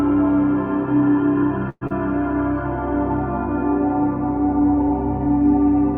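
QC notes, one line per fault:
1.69–1.92 s, long network dropout: the sound breaks off and is carried on by a synthetic continuation of the last sound for about 209 ms, which turns to a fading buzz and then to about 20 ms of near-silence before the signal resumes. About 80 ms of the original is gone, so the return is abrupt and skips ahead. The likely cause is a burst of lost packets long enough to exhaust concealment, with the receiver then shifting its playout delay by roughly 70 ms.
4.01–5.28 s, jitter buffer slow-down: across this stretch the audio plays at about 97% speed while its pitch stays put, giving a slightly stretched, drawn-out quality. The receiver is repeating short pitch periods and pause fragments to rebuild its reserve, adding about 45 ms of material in total.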